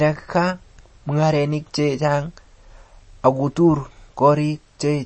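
MP3 compression damage runs throughout this speech clip, with nothing above about 8.4 kHz and a plainly audible watery, swirling texture, likely from an encoder starved of bits, which fits a bitrate around 32 kbps: it cut the treble and switched weak frequency lines on and off between frames.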